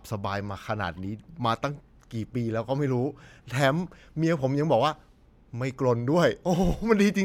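Speech recording, no technical faults audible anywhere in the clip.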